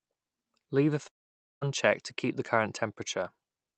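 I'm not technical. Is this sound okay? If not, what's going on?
No. There is a long network dropout from about 1.07 to 1.63 s, just before "to keep the current". For just over half a second the audio goes missing. The last sound is stretched into a brief fading buzz, then near-silence takes over, and the speech resumes with that stretch simply gone. The likely cause is a gap in the connection, where the incoming audio stopped arriving and the receiver had nothing real to play.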